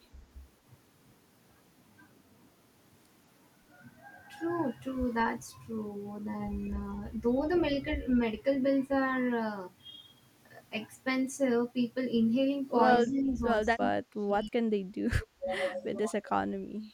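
A speech recording carries two problems. At 6.66 to 6.71 s a very faint, brief echo of the talker slips through, trailing the original by 189 ms and sitting roughly 30 dB below it. This is an echo leak, likely from a far end on loudspeaker whose echo canceller let a scrap of the returned sound escape. Later, the talker's level repeatedly sags and breaks up at 13.02 to 13.41 s, 13.75 to 14.54 s, 14.78 to 14.87 s, 15.16 to 15.50 s and 15.75 to 16.43 s. The drops range from a mild dip of around 10 dB to near-muting of about 35 dB in the longest stretch, which lasts most of a second. This is speech suppressed in double talk: both sides were likely talking at once, and the echo canceller, unable to separate the local talker from loudspeaker echo, turned both down.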